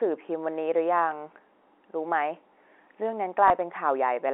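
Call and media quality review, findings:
Small blip at 3.48–3.50 s: packet loss with last packet repeated. One 20 ms packet was lost and concealed by replaying the previous packet over the G.711 telephone band.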